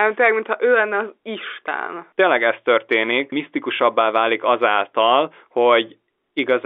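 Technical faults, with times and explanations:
Nothing stood out on listening to this speech recording, which has the narrow, telephone-line sound of G.711 coding.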